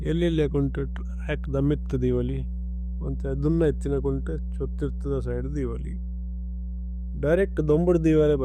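Mains hum sits under the speech throughout: power-line coupling adds a steady, pitched 60 Hz tone nearly as loud as the speech, unlike broadband rumble.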